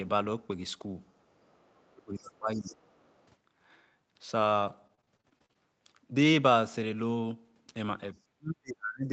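From 1.3 to 1.9 s a faint second voice sits under the speech, about 40 dB below it. This is the other side's voice leaking through, most likely loudspeaker sound that the echo canceller failed to remove from the microphone. On a spectrogram it shows as weak, separate harmonic traces beneath the main speech. It returns from 2.66 to 3.26 s, much louder at about 25 dB below the speech.

Between 1.91 and 2.77 s, overlapping that second leak, the main speech is held down for roughly 0.7 s in total, with the deepest dip around 25 dB. This is speech suppressed in double talk. The likely cause is that the canceller could not separate the talker from the echo while both were active, so it turned both down. The waveform envelope sags abruptly, and the spectrogram thins out, especially in the upper bands.

From 4.61 to 5.57 s, repeated packet loss gives a choppy, robotic quality. About ten short holes, none longer than 35 ms, add up to roughly 0.22 s missing, around a fifth of the span. 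Most were patched by stretching the preceding sound, which leaves smeared, repeating harmonic stripes on a spectrogram and small flat or notched spots in the waveform.

From 8.36 to 9.10 s, speech is suppressed in double talk again, much harder this time, dropping by up to about 40 dB for roughly 0.7 s. The waveform nearly collapses to silence in pieces. Across the whole clip nothing appears above 8 kHz, which fits the Opus call codec's bandwidth.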